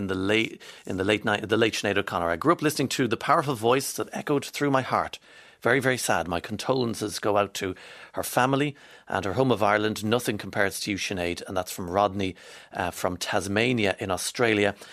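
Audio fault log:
No faults detected.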